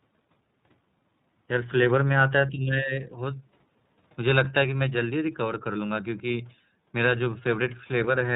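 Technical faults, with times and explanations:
Throughout, iLBC codec: speech is band-limited to 4 kHz with a rough, synthetic edge from 30 ms frame coding, consistent with about 13.3 kbps; the spectrogram shows an empty band above 4 kHz.
2.50 to 2.94 s, speech suppressed in double talk: the voice dips by about 10 dB for roughly 400 ms, likely an echo canceller muting it during overlap; the waveform envelope sags there.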